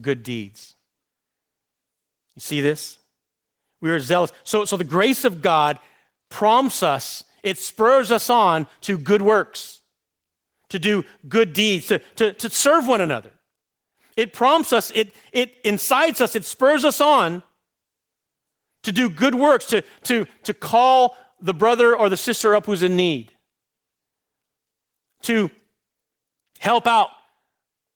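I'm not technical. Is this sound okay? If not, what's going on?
Yes, this speech recording sounds fine, and there is nothing wrong to point to. You can listen to it as it is without anything getting in the way.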